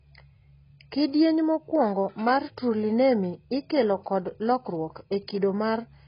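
Throughout the speech, nothing sits above about 5.1 kHz, and sibilants turn fizzy and warbling, which points to heavy AAC compression, likely at a very low bitrate near 16 kbps. Unlike a plain low-pass filter, the remaining band has holes or noise-filled bands and a smeared, unstable texture.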